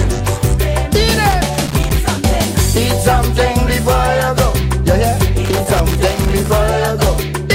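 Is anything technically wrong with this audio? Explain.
Yes. Loose connector crackle appears twice, from 1.31 to 1.98 s and from 5.45 to 6.48 s. A worn or dirty contact keeps making and breaking as it shifts, chopping the signal, so each stretch comes through as an irregular burst of scratchy crackle.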